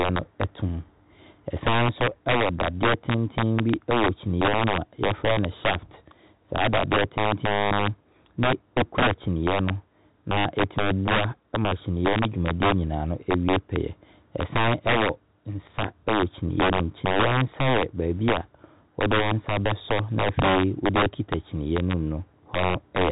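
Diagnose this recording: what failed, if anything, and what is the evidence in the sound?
Integer overflow at the sample-format conversion stage runs through the whole speech recording: gain pushes peaks about 9 dB past full scale, and the few percent of samples over the limit wrap to the opposite sign instead of holding there. That yields violent cracks on loud syllables, far harsher than clipping's flattened buzz, heard within a telephone band that stops near 3.8 kHz.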